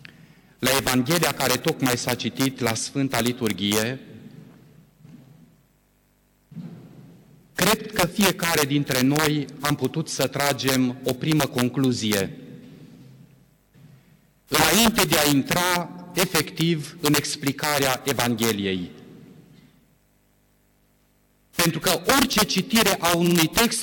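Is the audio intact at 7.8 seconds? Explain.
No. Two faults affect the audio at that moment.

Repeated frames: from 7.78 to 7.87 s, a single block of about 46.4 ms, which fits one compressed frame, was delivered to the decoder three times in a row. The decoder played the same slice of sound twice more, adding 92.9 ms. It is heard as a brief stutter, a quick triple-repeat of the same fragment.

Integer overflow: through the whole clip, including this point, the signal was driven about 11 dB past the integer ceiling. Instead of being limited, the loudest samples wrapped around to the opposite extreme of the range, around one percent of them. Each wrapped peak jumps across the full scale in an instant, so loud moments produce violent, sharp cracks, harsher and more abrupt than ordinary clipping distortion.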